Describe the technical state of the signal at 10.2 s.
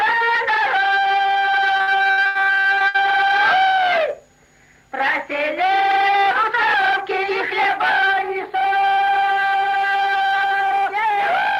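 At 10.2 s the signal is intact, with no audible fault at that moment.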